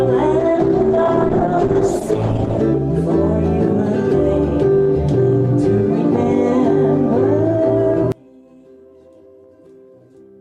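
Two separate faults affect this audio. From 0.4 s to 2.69 s there is a call bitrate drop: the encoder falls from 64 kbps to 11 kbps and stays near that floor for about 2.2 s, so the sound turns coarse and watery, with the high frequencies cut away, until the rate climbs back. From 8.12 s to the end the level suddenly collapses by about 30 dB, leaving only a faint residue of the sound. This is likely one channel inverted: with reversed polarity on one side, everything shared between the channels cancels when they are summed to mono, and only their small difference survives.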